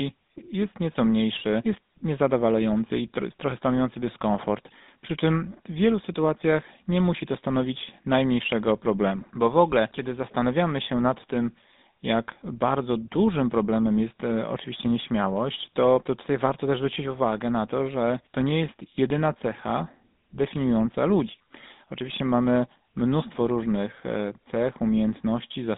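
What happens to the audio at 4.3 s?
At 4.3 s the speech carries GSM full-rate codec damage, present throughout the clip. A vocal-tract model driven by coarse, regularly spaced pulses gives a buzzy, gravelly roughness, and nothing reaches above 3.8 kHz. Plain telephone band-limiting would sound dull but smooth rather than rough.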